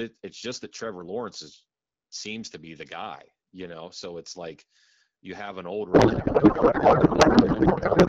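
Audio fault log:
5.93–8.08 s, codec payload misread: after "you have an old", clear AMR-WB speech becomes garbled noise and warble that barely tracks it, to the end. This points to octet-aligned frames being unpacked as bandwidth-efficient, misplacing every field. Unlike packet loss, nothing goes silent.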